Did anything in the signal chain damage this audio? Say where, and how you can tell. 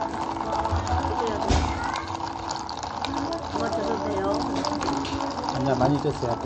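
Yes, at the codec stage. Throughout the clip, the sound has nothing above 8.3 kHz. The top end stops at a hard, fixed edge. The damage is plainly audible, with a watery, swirling texture as faint detail flickers in and out. This is likely MP3 compression at a low bitrate, consistent with about 48 kbps. Short of bits, the encoder discarded the treble above that cut-off. It also dropped weak frequency lines frame by frame, causing the swirl.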